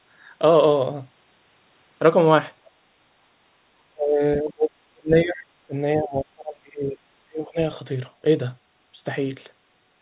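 At 2.64 to 2.76 s the background is gated by the echo canceller. For roughly a tenth of a second the room sound falls away by about 12 dB while the far-end loudspeaker plays, then comes straight back. It is brief and shallow. That sets it apart from the later dropouts.

From 3.9 to 5.37 s, again at 5.67 to 5.74 s, and from 5.96 to 7.59 s, the talker's own speech sinks deeply, by roughly 30 to 35 dB in the long stretches and about 20 dB in the short dip. It stays turned down for around a second and a half in each long stretch and for about 70 ms in the short dip. This is speech suppressed in double talk. The likely cause is both sides speaking at once, so the canceller mistakes the near voice for echo and turns it down. Unlike the gating, the foreground voice itself is lost, for far longer. Throughout the clip nothing is heard above 4 kHz, which fits a narrowband G.711 call path.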